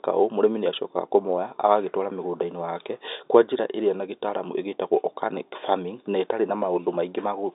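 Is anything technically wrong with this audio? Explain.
No, nothing technically wrong here.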